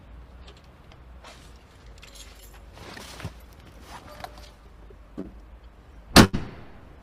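Short concealed packet loss at 5.21 to 5.26 s leaves a brief smear in the audio. About 20 ms of the stream never arrived in time to be decoded, and the receiver covered the hole with roughly 25 ms of synthesized continuation, extending the preceding sound before crossfading back into the real signal. A gap this small registers as a wobble rather than a dropout. A burst of packet loss follows at 6.24 to 6.35 s. Around 80 ms went missing in a row, and the receiver stretched the last received sound across about 86 ms, fading it as it went, so the concealment is heard as a held, decaying tail instead of fresh content. When the stream resumes it picks up further along, and the stretch that was lost is simply absent.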